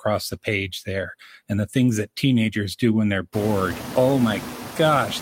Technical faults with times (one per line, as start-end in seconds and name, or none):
0.00-5.21 noise suppressor artifacts